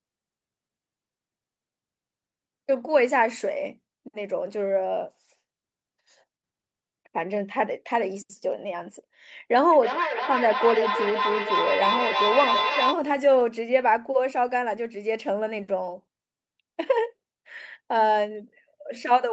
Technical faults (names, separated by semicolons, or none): feedback howl